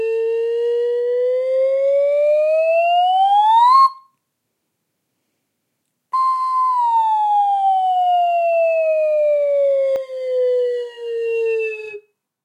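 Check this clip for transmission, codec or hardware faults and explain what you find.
One fault appears near the end of the clip.

Channel delay (comb filtering), from 9.96 s to 12.44 s: one channel runs about 20 ms behind the other before the mono sum, carving regularly spaced notches starting around 30 Hz. The sound turns rough and slightly doubled. Unlike a discrete echo, the copies fuse rather than being heard separately.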